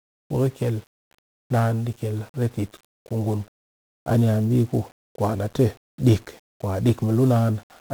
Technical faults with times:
0.00-7.94 1-bit DFPWM compression

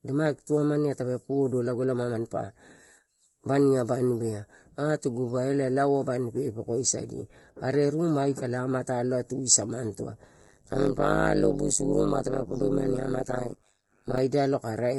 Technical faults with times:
0.00-14.98 channel delay (comb filtering)
0.00-14.98 low-delay AAC compression
10.41-14.19 overlap-add ripple

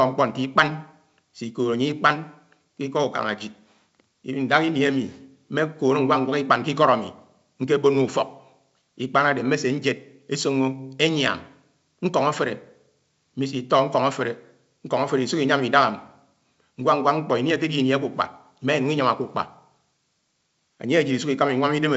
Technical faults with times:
none

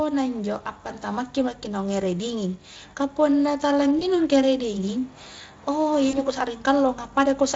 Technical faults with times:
3.99-4.03 VoIP packet loss concealed by the speech codec
6.09-6.18 VoIP packet loss concealed by the speech codec

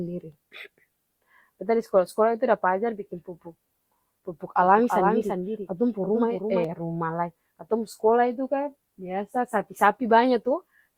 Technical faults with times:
4.60-6.64 doubled audio track

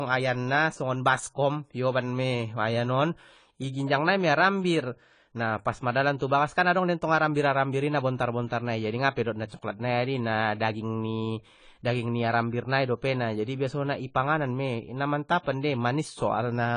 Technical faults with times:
0.00-16.76 AAC compression
9.49-9.52 pre-echo

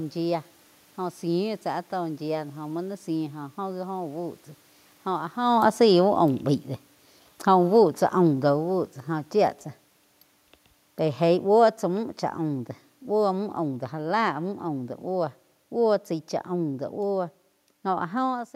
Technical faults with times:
5.37-9.64 automatic gain falling
11.17-14.39 automatic gain falling

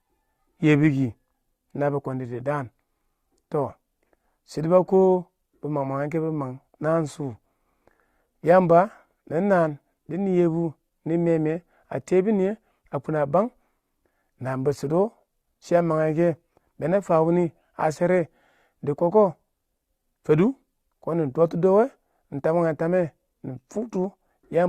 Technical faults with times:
none

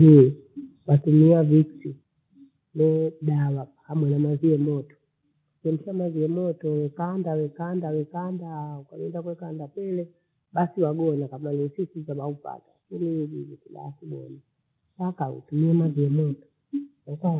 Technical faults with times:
0.12-0.22 microphone overload
1.02 microphone volume stepped down
2.04 microphone volume stepped down
4.65 microphone volume stepped down
14.22 microphone volume stepped up
16.05 microphone volume stepped down

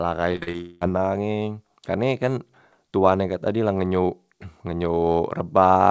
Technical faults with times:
0.32-0.85 repeated packet loss (robotic sound)

